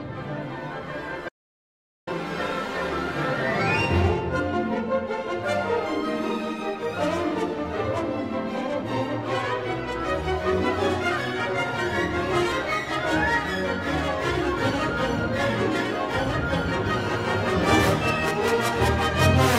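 The audio has one audio dropout to silence, from 1.29 s to 2.07 s. For about 0.78 s the sound cuts off to silence, with no room tone underneath. The input was likely lost while recording continued, writing silence. That stretch of sound is gone.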